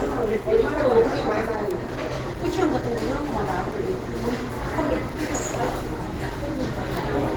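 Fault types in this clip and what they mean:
Opus compression: Grainy, rough, hoarse texture throughout, with a muffled quality, likely from Opus at about 16 kbps in its hybrid speech/music mode.
Bit error spike: Two isolated single-sample ticks at 1.71 s and 6.97 s, each a broadband click unrelated to the surrounding sound, from a flipped bit.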